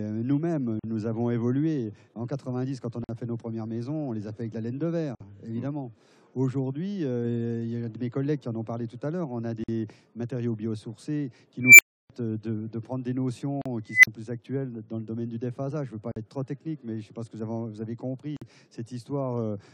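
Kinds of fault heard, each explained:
Gap at a join of encoded pieces: the audio was encoded in separate chunks and stitched back together without trimming the encoder's start-up delay and end padding, so a short hole of silence sits at each seam. You get seven of them, at 0.79, 3.04, 5.15, 9.64, 13.62, 16.12 and 18.37 s, each around 40 to 53 ms, with smeared edges, and the sound picks up right where it left off.
Unstable filter: a recursive filter ended up with bad coefficients, so its output kept feeding on itself and blew up until the numbers overflowed and it reset. It happens twice, at 11.61 s and 13.91 s, as a squeal somewhere around 2 kHz that swells hard over about 182 ms and 126 ms respectively, hits clipping, then drops out into silence, roughly 310 ms the first time and only 40 ms the second.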